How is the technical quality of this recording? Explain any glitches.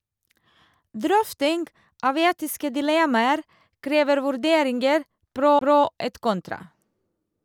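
There is one glitch, a CD skip. Right after "etiske dilemmaer krever vurderinger", from 5.59 to 5.61 s, a tick and a very brief mute break the speech before it resumes from a different point, because the laser jumped to another turn of the disc's spiral.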